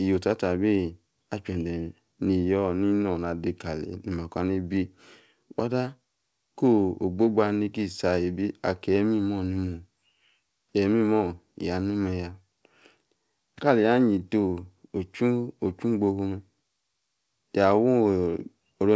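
No technical faults are audible.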